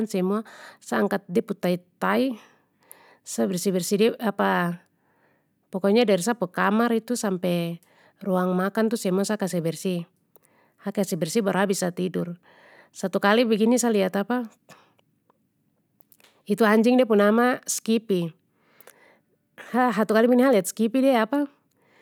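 Listening to the speech recording, nothing stood out as a technical fault at any point.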